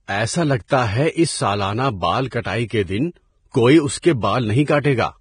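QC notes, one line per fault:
throughout: Vorbis compression, likely. Nothing above 9.7 kHz. Speech treble sounds hissy and grainy from heavy quantisation, which fits a bitrate near 24 kbps.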